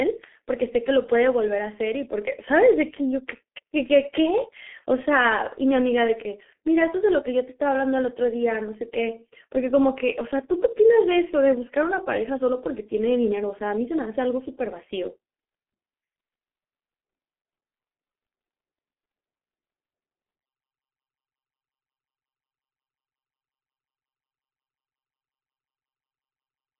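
From start to end, the speech carries heavy G.723.1 codec damage. Nothing above 3.8 kHz survives, and the band sits near 250 Hz to 3.4 kHz. The voice sounds muffled and hoarse. Consonants blur, which fits a very low rate around 6 kbit/s.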